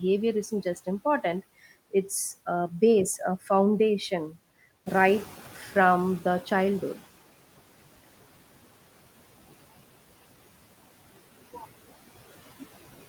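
Noise suppressor artifacts run through the whole clip. The suppressor treats the steady background as noise and pulls those bands down, by about 17 dB. It does this frame by frame. So the residue dips in the gaps and comes back up under the speech.

Right after "a base a foundation", at 4.86 s, the noise suppressor is caught catching up. The room noise jumps by about 10 dB around the 5-second mark. The suppressor's noise estimate is still set for the quieter level. For a moment the louder background passes through with less reduction. Over the next 2.2 seconds the estimate adapts. By 7.08 s the noise has sunk again, cut by about 16 dB.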